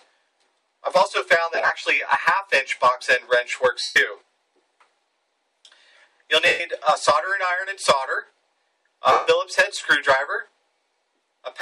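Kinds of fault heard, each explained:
lost LE Audio frames: at 1.55–1.70 s (scattered gaps), 3.82–3.96, 6.46–6.60 and 9.12–9.27 s, dropped Bluetooth frames, likely 7.5 ms each, are concealed by the LC3 decoder repeating the last spectrum with randomised signs and then fading it.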